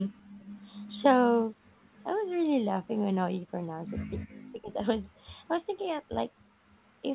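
Background gated by the echo canceller opens the trouble in this band-limited speech recording, whose content stops at 4 kHz as a G.711-style call path would leave it. From 0.21 to 0.4 s the room sound sinks by about 27 dB for roughly a fifth of a second. While the far end's audio was playing out of the loudspeaker, the canceller clamped the microphone, pulling the ambience down with it, then released it. An echo leak follows from 0.4 to 0.89 s, and a fainter one at 1.95 to 1.99 s: a copy of the speech trailing the original by 272 ms, around 20 dB below it in the first stretch and around 40 dB below in the second. The likely cause is a loudspeaker-side canceller that failed to subtract all of what its microphone caught, so part of the playback was transmitted back down the line. Speech suppressed in double talk appears at 4.14 to 4.22 s, a dip of roughly 25 dB lasting about 70 ms, and again at 4.43 to 4.72 s, where the voice falls by roughly 40 dB for about 300 ms. 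The talker is turned down while the other side is also talking, which points to a canceller that could not tell its own talker apart from the loudspeaker echo and turned both down together.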